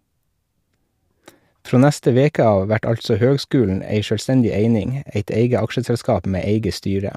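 No dropouts, glitches, distortion or level problems are audible anywhere in the recording.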